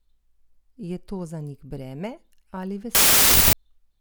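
From 2.95 to 3.53 s, after "za njih breme ali", a wrong sample width misaligns the bytes, fitting packed 24-bit data read as 32-bit, so loud noise buries the speech, running 1.33 times fast and pitched up.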